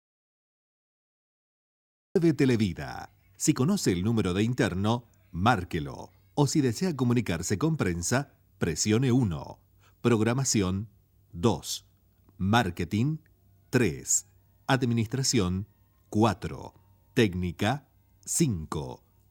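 From the very start until 2.16 s the clip is dead silent, with no room tone at all, and the sound then comes in mid-flow. This is an audio dropout to silence, likely from the input being lost while the recorder kept writing zeros.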